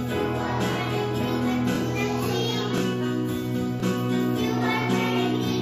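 You'll hear a short repeated-chunk stutter at 0.73, 1.76, 2.78, 3.80 and 4.83 s, roughly once a second. That's overlapping chunks: each 1 s block restarts about 23 ms early, so that sliver plays twice at every join.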